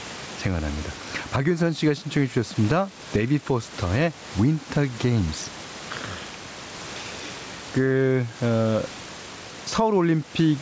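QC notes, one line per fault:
throughout, gain pumping: input gain is likely set too high for the microphone, so a fast limiter clamps down on each loud syllable and lets go in pauses. The gain swings around 15 dB, leaving speech squashed.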